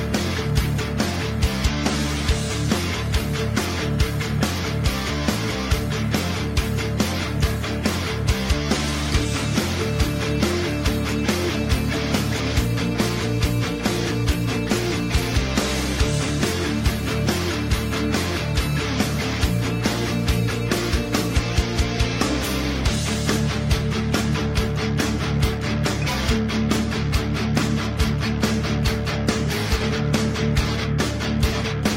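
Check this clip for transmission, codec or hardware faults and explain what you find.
Nothing in the clip points to a fault anywhere between capture and playback. The audio holds steady throughout, with nothing to flag.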